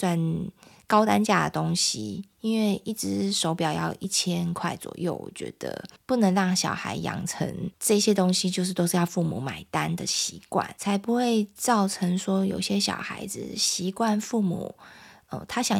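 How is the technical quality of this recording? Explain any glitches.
The quality is compromised throughout by a regular buzz that rides on the speech.

From start to finish there is a resampler restarted on every block fault. Each 10 ms block was converted separately, which points to a 44.1 kHz to 48 kHz conversion, so every block edge carries an error. These edges produce a 100 Hz buzz that is heard only while speech is present. On a spectrogram this appears as thin vertical lines every 10 ms, and the waveform shows tiny kinks at each block boundary.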